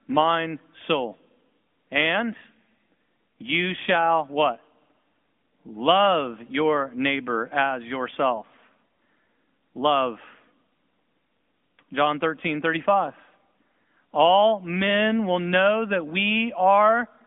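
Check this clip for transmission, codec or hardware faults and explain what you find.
One fault runs through the entire recording: the speech has been carried over the AMR narrowband mobile codec. The band is confined to roughly 200 Hz to 3.5 kHz with nothing above 3.6 kHz, because the codec works at 8 kHz sampling. It rebuilds the voice from a vocal-tract model fed by sparse pulses, which leaves the plainly audible buzzy, synthetic texture here, consistent with a mid-rate mode around 10.2 kbps.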